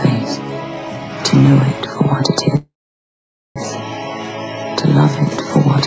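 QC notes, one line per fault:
2.56–3.58 s, call audio freeze: the sound stops and a decaying continuation of the last moment fills the hole, fading to near-silence for about 0.85 s of the roughly 1 s stall before the audio resumes where it left off. This most likely comes from packets held up in transit and the jitter buffer running dry. Nothing is lost, but everything after it lands about 1 s later. Band-limited at 8 kHz throughout, consistent with a G.722 call path.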